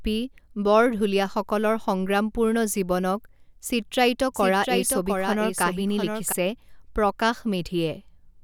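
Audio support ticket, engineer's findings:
Doubled audio track, 4.34 to 6.32 s. Likely a second, slower capture path mixed in alongside the main one. A full-band copy trails by roughly 0.7 s, about 5 dB below the original, with no decay or room colour. It cuts in and drops out abruptly, giving a clean out-of-step echo of the speech.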